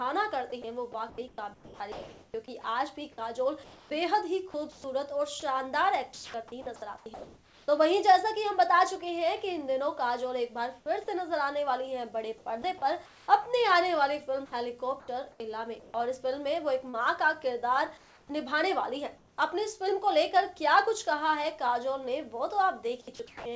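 A sender-side voice detector likely switched transmission on and off repeatedly, leaving sound chopped by the voice detector from 0.62 to 7.68 s, 12.38 to 19.37 s and 23.01 to 23.45 s. Within these stretches, roughly 2.1 s, 1.2 s and 0.28 s of real audio were replaced with comfort noise. Sound edges drop out. All of it plays through a call path consistent with G.722, which leaves nothing above 8 kHz.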